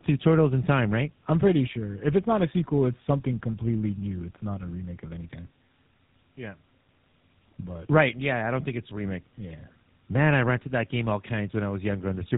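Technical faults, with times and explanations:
Throughout, tandem speech coding: the speech passed through two low-rate speech codecs in a row, with a decode and re-encode at each hand-off, a chain that fits AMR-NB followed by GSM full rate with a G.711 link between them. The second coder had to model audio already stripped and smeared by the first, so the errors stacked. The result is rough, muffled, warbling speech with nothing above 3.8 kHz.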